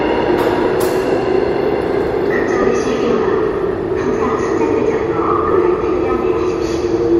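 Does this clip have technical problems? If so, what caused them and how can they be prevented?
Yes. There are lost LE Audio frames at 0.64, 2.62 and 5.52 s, each a tiny noisy smear about 7.5 ms long, which fits a single dropped LC3 frame. The decoder filled each gap by replaying the previous spectrum with scrambled phases. The light codec compression underneath is just ordinary lossy coding. To prevent the dropouts, keep the Bluetooth link clean by moving closer, cutting 2.4 GHz interference, and allowing more retransmission headroom.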